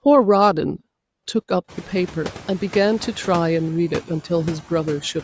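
Throughout the speech, background noise drops away in pauses and swells back under phrases, and the room noise rises at roughly 1.5 s. These noise suppressor artifacts come from frame-by-frame cuts of about 10 dB on bands judged steady noise.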